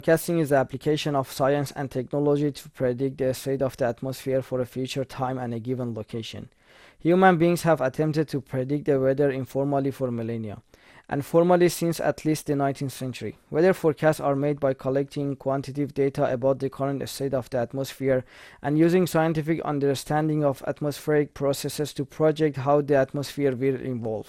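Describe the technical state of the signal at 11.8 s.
At 11.8 s the speech carries generation loss that runs through the whole clip: it sounds swirly, hollow and smeared, with consonant attacks blurred. This is likely the result of around seven successive MP2 encodes at a rate that fits 96 kbit/s, each pass requantising on a shifted frame grid so the damage compounds. A spectrogram would show a hard ceiling at 17.4 kHz, and onsets softened in the waveform.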